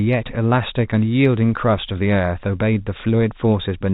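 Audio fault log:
No faults heard; the speech sits in the narrow band of G.711 telephone coding, which behaves as that path should.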